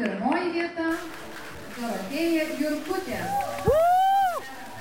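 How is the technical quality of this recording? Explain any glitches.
The recording has one clear fault that persists to the end. A stuck bit sets in at 0.91 s and continues through the rest of the clip. From that point the audio turns harsh and buzzy, and quiet passages fill with a gritty noise floor around about -40 dBFS. This likely comes from one data bit held at a fixed value, so roughly half the samples shift by that bit's weight in a waveform-dependent pattern. Each time low-level samples cross zero the error flips, which is why even near-silence carries noise.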